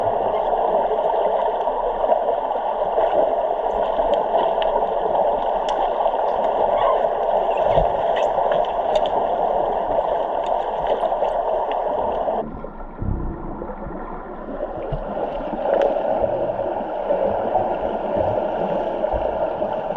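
No technical faults are audible anywhere in the sound.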